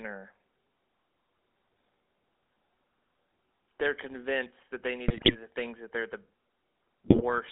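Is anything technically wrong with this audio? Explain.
Yes. The whole clip carries GSM full-rate codec damage: speech is confined to roughly 300 Hz to 3.7 kHz and has a buzzy, gravelly roughness, which fits the 13 kbps full-rate GSM codec. It models the vocal tract and drives it with a coarse, regularly spaced pulse excitation. Unlike plain band-limiting, the harshness sits inside the passband itself.

There are also two bursts of GSM bit errors, at 5.08–5.37 s (between "convinced that they" and "the things that they're") and at 7.06–7.22 s. Corrupted filter, pitch and gain values make the decoder produce squawks, pops and gargling. Packet loss would leave gaps or smeared repeats instead.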